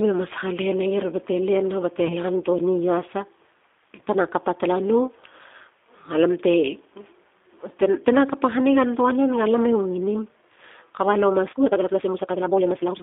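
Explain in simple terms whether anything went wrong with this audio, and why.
G.729 codec damage runs through the whole speech clip. This phone codec rebuilds the voice from a rough model of the throat and a few pulses, and keeps only about 250 Hz to 3.6 kHz. The voice sounds thin, slightly rough and synthetic.

VoIP packet loss concealed by the speech codec occurs from 2.07 to 2.15 s and again from 3.96 to 4.01 s, just before "tena kapa tala no". Each time one 20 ms chunk went missing. The decoder filled the gap by guessing from the last sound, leaving a brief stretched, fading sound.

A time-stretched section starts at 11.47 s, right after "kaba lo", and runs to the end. The pace suddenly jumps to about 1.92 times normal speed while the pitch stays the same. The likely cause is software squeezing the audio by dropping short pieces, which makes it sound rushed.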